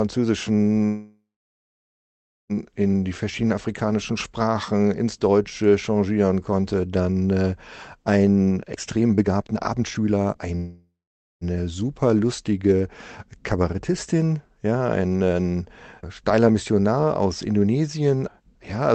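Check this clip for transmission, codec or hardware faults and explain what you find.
The clip has three kinds of transmission fault from a call link. The sound is band-limited to about 8 kHz, consistent with an Opus call path.

Call audio freeze occurs twice, from 0.85 to 2.53 s and from 10.56 to 11.44 s. The likely cause is delayed packets draining the jitter buffer. The receiver extends the last sound as a fading buzz or hiss, then falls silent for about 1.27 s and 0.5 s. The audio resumes where it stopped, with nothing lost.

A jitter buffer slow-down runs from 3.14 to 3.33 s. The receiver repeats small slices of waveform to rebuild its reserve. This adds 37 ms. The speech plays at 84% speed with unchanged pitch and sounds briefly drawn out.

A jitter buffer speed-up runs from 8.48 to 10.53 s. The buffer held too much audio, so the receiver cuts short pitch-period pieces repeatedly, roughly a second in total. 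The speech runs at 154% speed, same pitch, and sounds noticeably hurried.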